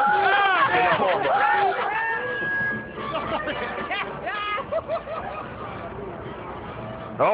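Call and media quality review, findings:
Loudspeaker feedback squeal, 1.64 to 3.15 s. A single 1.6 kHz tone swells over roughly a second until it is about as loud as the surrounding sound, then holds until 3.15 s. The probable component is a microphone picking up its own loudspeaker output. Loop gain at 1.6 kHz exceeds unity, so each pass round the loop reinforces that frequency and it keeps growing until the amplifier limits it or the loop is broken.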